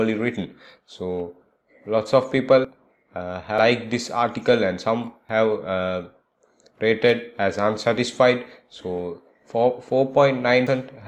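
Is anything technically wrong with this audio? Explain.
Yes. At 2.65, 3.58, 5.29 and 10.67 s, the likely cause is a dropped buffer (overrun): unread samples were overwritten and the edges were spliced together. Each is a jump forward in the sound, losing roughly a tenth of a second at 2.65 and 5.29 s, about 0.15 s at 3.58 s and about a third at 10.67 s.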